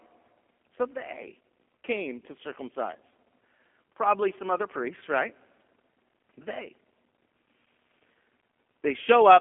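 From start to finish the speech carries G.729 codec damage, consistent with an 8 kbit/s stream. Each 10 ms frame is rebuilt from a modelled filter, pitch and sparse pulses, so alongside the 200 Hz to 3.4 kHz line band, plainly rough, buzzy synthesis appears, unlike clean band-limiting. Faint room noise sits about 49 dB below.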